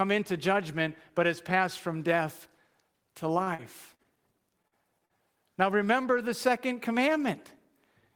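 Speech carries three kinds of network fault. From 3.43 to 4.17 s there is repeated packet loss with a robotic sound: four gaps, the longest about 49 ms, patched by extending the last sound, so about a fifth of that stretch is synthetic and comes out choppy and robotic. The gaps keep recurring, which sets it apart from a single dropout. Short concealed packet loss hits twice, at 4.68 to 4.75 s and 5.06 to 5.12 s. Each time about 40 ms never arrived and was filled in, giving one brief smear or wobble that blends straight back into the real audio rather than a run of choppiness. Between 4.94 and 5.18 s a jitter buffer slow-down stretches the audio to about 88% speed, adding 36 ms by repeating pitch periods. Unlike a tape or clock slowdown, the pitch stays put while sounds drag.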